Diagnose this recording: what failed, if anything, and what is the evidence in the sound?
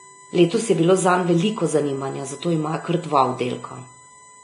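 A steady 1 kHz whine runs under the speech for the whole clip, roughly 25 dB below it: USB whine entering through the analogue wiring, power or ground, from the bus's 1 ms frame clock. Its fixed pitch at exactly 1 kHz distinguishes it from mains hum.

At the codec stage, the speech has nothing above 10.5 kHz throughout and carries two distinct layers of artefacts. This points to transcoding between lossy codecs, likely a low-bitrate Vorbis encode followed by WMA 1 at around 64 kbit/s. A single encode would show only one kind of artefact.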